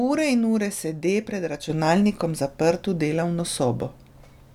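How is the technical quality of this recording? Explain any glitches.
The recording has one clear glitch. At 1.70 s, right after "ure sede pred", the level jumps about 6 dB and stays there to the end. This is a sudden gain jump, likely a digital gain change applied without a ramp. The background noise rises together with the speech, so the talker did not simply get louder, and the step is instant rather than a gradual fade or compressor swell.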